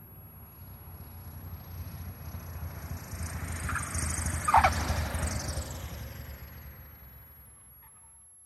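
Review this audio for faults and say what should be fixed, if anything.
A switching supply whistle runs through the whole clip as a thin, high tone that wanders between about 11.1 and 11.6 kHz, sitting roughly 20 dB below the main audio. The drifting pitch shows a switch-mode regulator dropping into an audible burst-mode frequency, or two supplies beating against each other, as its load shifts. To prevent it, power the recording chain from a linear or well-filtered supply, keep switching adapters away from preamp grounds, or use regulators with fixed frequencies above the audio band.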